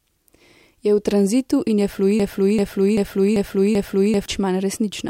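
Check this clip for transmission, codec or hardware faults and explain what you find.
One transmission fault is present in this speech clip. Broken-record loop, from 2.20 s to 4.26 s: a fragment of about 390 ms repeats exactly, back to back, five times. This is likely a stalled player or stream resending its last buffered piece, and the speech that should have played during that stretch is lost.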